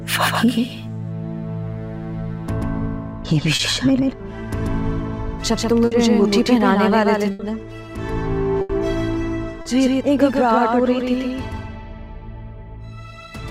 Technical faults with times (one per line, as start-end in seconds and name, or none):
0.00-13.51 doubled audio track
3.55-3.61 short concealed packet loss
5.85-5.93 burst of packet loss
7.31-7.41 burst of packet loss
8.61-8.71 burst of packet loss
9.61-9.67 short concealed packet loss